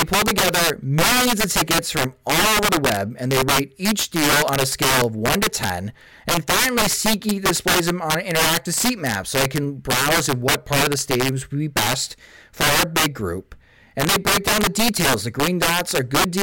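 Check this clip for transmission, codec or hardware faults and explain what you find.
Integer overflow runs throughout this speech: with gain about 8 dB too high, loud peaks wrap to the opposite sign, giving violent cracks far harsher than flat clipping.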